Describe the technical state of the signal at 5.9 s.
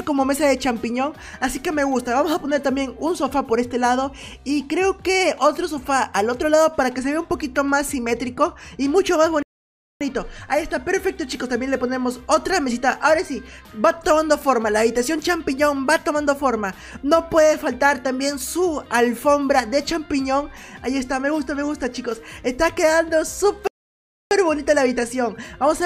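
At 5.9 s the signal is intact, with no dropout, distortion, glitch or other fault at that point.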